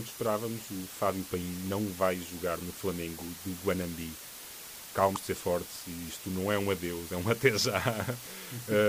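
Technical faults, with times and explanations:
Throughout: low bit depth with dither. The speech appears to be carried by only about 6 bits, with dither randomising the rounding error into a steady, even hiss roughly 15 dB below the speech. A spectrogram shows a flat, uniform noise floor across all frequencies, and the waveform stays a fuzzy band even in pauses.
5.13–5.17 s: damaged data in a compressed stream. Just before "de ser fortes e", corrupted frames make the decoder misread the data and lose sync, producing a brief glitch.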